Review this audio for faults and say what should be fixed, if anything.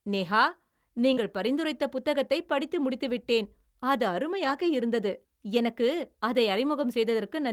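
There's a short concealed packet loss at 1.13 to 1.19 s, just before "பரிந்துரைத்த புத்தகத்தைப் படித்து முடித்து". About 40 ms of audio never arrived in time, and the decoder papered over roughly 34 ms of it by carrying the previous sound forward before blending back into the real signal. You hear it as a quick smear or wobble right at the start of that phrase. To prevent it, give the jitter buffer a bit more headroom so late packets still make it in.

Overlapping that, at 1.17 to 1.23 s, is a lost packet rebuilt from error correction. Here 40 ms came back from the low-bitrate backup copy carried in the next packet, which fits a couple of 20 ms packets. There's no gap, but that bit sounds rougher and noisier. The longer one is at 4.45 to 4.67 s, between "படித்து முடித்து விட்டேன் அது" and "இருந்தது எனக்கு அதை". That's about 120 ms rebuilt, consistent with six separate 20 ms packets. To prevent it, fix the network path's loss, or raise the bitrate so the backup copies carry more detail.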